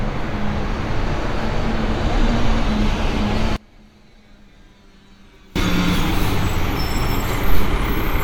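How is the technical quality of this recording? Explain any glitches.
The recording has one clear glitch. From 3.56 to 5.56 s the sound nearly disappears, dropping by about 29 dB. What remains is faint. The likely cause is one channel inverted. One stereo channel has its polarity flipped. When the two channels are summed to mono, everything common to both cancels. Only the small difference between them survives. The full level returns at 5.56 s.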